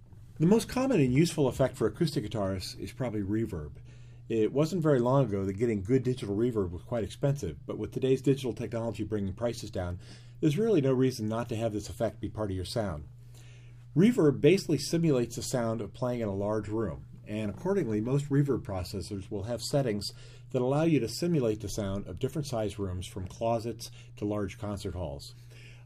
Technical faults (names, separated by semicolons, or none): none